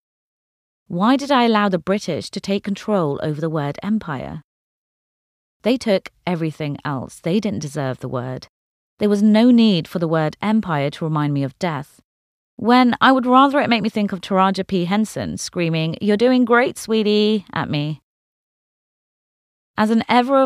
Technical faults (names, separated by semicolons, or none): none